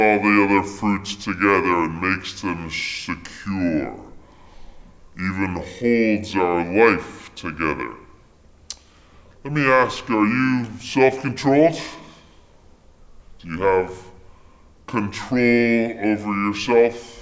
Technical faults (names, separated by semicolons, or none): wrong sample rate